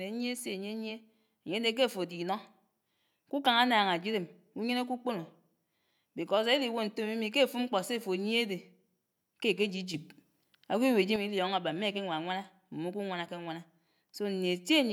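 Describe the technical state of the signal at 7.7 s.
At 7.7 s the speech signal is intact, with no audible fault at that moment.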